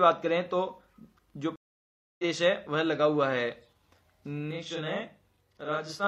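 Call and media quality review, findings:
Stream reconnect, 1.56 to 2.24 s. Connection dropped, player reconnected and restarted its decoder mid-stream. Result: 0.63 s of silence, then audio resumes about half a second further on, so a stretch of material is skipped rather than paused.

Channel delay (doubling), 4.51 s to end. One channel arrives 40 ms late through an oversized buffer, then both are summed to mono. Result: a same-level delayed copy sits under the original, heard as a slapback doubling.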